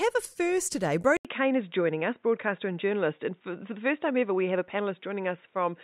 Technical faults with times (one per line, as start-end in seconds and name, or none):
1.17-5.83 input switched to a poorer device